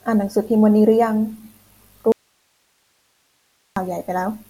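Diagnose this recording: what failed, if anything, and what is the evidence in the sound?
An audio dropout to a faint residue runs from 2.12 to 3.76 s: the speech cuts off abruptly for 1.64 s, leaving hiss about 45 dB below the signal. The likely cause is a lost upstream connection with the input stage still live. A digital dropout would go fully silent, and a pause or fade would not cut so sharply.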